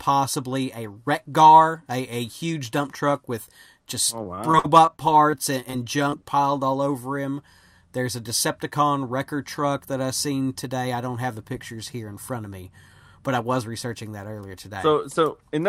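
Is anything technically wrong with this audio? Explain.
Yes, there are two packet-loss problems, both in the first half of the speech.

From 4.23 to 5.75 s, right after "truck with just oh", there's repeated packet loss that gives the robotic sound. Chunks of audio kept failing to arrive in time, and the receiver papered over each hole by extending whatever it had last played. The holes come in a rapid string, the longest about 45 ms, with concealment covering around 14% of that stretch. The result is choppy speech with bits missing.

Then from 6.10 to 6.14 s, just before "piled all over him", there's a short concealed packet loss. About 20 ms of audio never reached the decoder in time, so the receiver synthesized a fill by carrying the previous sound forward, then crossfaded back into the real signal. It's brief enough to come across as a quick smear or wobble rather than a dropout.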